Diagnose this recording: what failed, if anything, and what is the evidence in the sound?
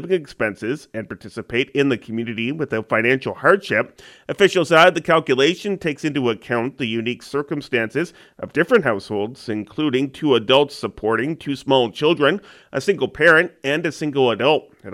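No failure is audible at any stage, and the sound gives no evidence of a fault to diagnose.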